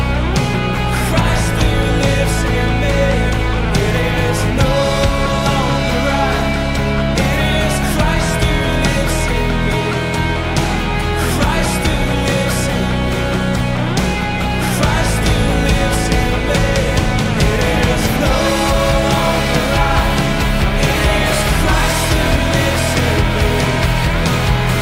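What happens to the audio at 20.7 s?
Nothing goes wrong at 20.7 s; the audio plays through that moment intact, with no dropout, glitch or other fault.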